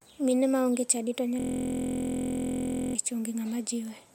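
From 1.40 to 2.95 s the speech freezes into a system hang loop. The machine stalled while the hardware replayed one 23.22 ms chunk 67 times, which fits a 1024-sample buffer. It makes a steady 43.1 Hz buzz: identical repeating waveform blocks, evenly spaced spectrogram harmonics.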